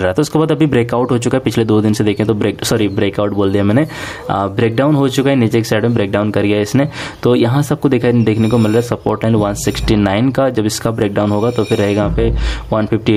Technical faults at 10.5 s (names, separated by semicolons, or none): gain pumping